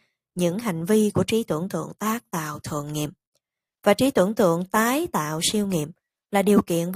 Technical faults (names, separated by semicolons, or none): none